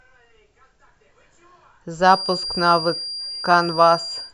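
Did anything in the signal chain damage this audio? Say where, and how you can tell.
Yes. From 1.98 s to the end, a thin, slowly swelling and fading 4.8 kHz feedback whistle sits well under the speech, likely from a speaker-to-microphone loop held just below runaway.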